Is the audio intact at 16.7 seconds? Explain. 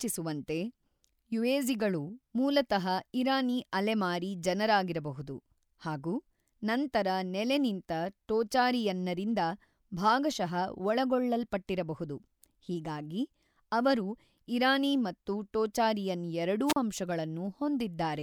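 No. Just after "ಇರಾನಿ ಮತ್ತು ಟೋಚಾರಿಯನ್ ಎರಡೂ", a wireless microphone squelch dropout runs from 16.66 to 16.76 s. The radio link fades, hiss rises, and the receiver's squelch mutes the output for 38 ms before the speech returns.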